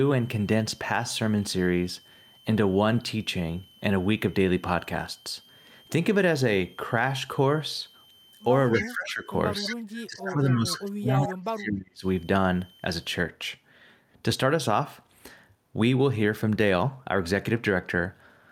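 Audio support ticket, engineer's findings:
Switching supply whistle, 0.00 to 13.17 s. Steady high tone near 3 kHz, wandering between 3.02 and 3.24 kHz, about 30 dB below the speech, then gone. Source: a switching power supply either running in audible burst mode or beating against a second supply, putting its switching product into the audio band.

Echo leak, three short returns: 8.72 to 8.84 s, 9.62 to 9.76 s, 11.19 to 11.31 s. Delayed copy of speech trailing by 234 ms, about 10 dB under the direct speech. Likely cause: residual echo from a loudspeaker-side endpoint whose echo canceller left part of the mic pickup of its own playback, which was then sent back.

Speech suppressed in double talk, three dips: 8.80 to 9.31 s, down roughly 20 dB; 9.57 to 9.73 s, down roughly 5 dB; 10.07 to 12.04 s, the longest at about 2 s, down roughly 30 dB. Likely cause: the echo canceller on the loudspeaker side could not separate its local talker from the far-end echo and attenuated both while the two sides talked at once.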